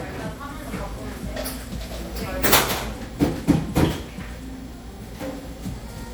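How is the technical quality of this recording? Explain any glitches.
The quality is degraded by generation loss across the full clip. The audio sounds swirly, smeared and hollow, with blurred attacks, more than a single lossy pass would leave. The likely cause is repeated MP3 re-encoding, about four passes at around 96 kbit/s, each requantising on a shifted frame grid so noise and spectral holes accumulate.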